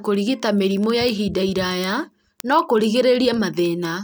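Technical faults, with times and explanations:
0.15 to 4.03 s, word clock ticks: around seventy sharp ticks recur about every 70 ms, each where one sample is dropped or repeated as an unlocked receiving clock drifts roughly 300 ppm from the sender's. Their steady, metronomic spacing sets them apart from random clicks.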